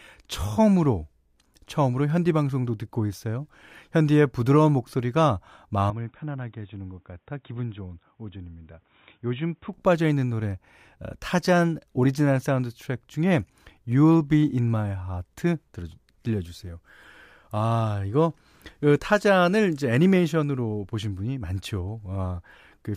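From 5.90 s to 9.74 s the recording has most likely been switched to a poorer input device, then back again. No gap marks either switch. Over that stretch the speech loses everything above 3.8 kHz, so it turns dull and boxy. It also drops a few decibels in level and carries a faint new background noise well below the speech. At 9.74 s the full, brighter sound returns just as abruptly.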